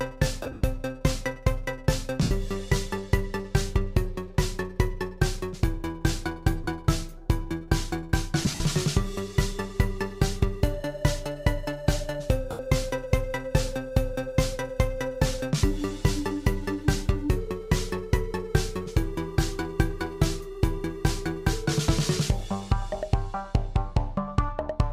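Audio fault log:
0.42–0.64 s, 2.22–2.31 s, 6.64–6.67 s, 8.42–8.60 s, 12.51–12.60 s: lost LE Audio frames. Bluetooth frames went missing (about 150, 83, 30, 105 and 83 ms of audio; the first and fourth gaps are scattered in runs of up to roughly 70 ms). The LC3 decoder refilled each gap by repeating the last spectrum with random signs, so tones smear into short noisy patches that sag during the longer runs.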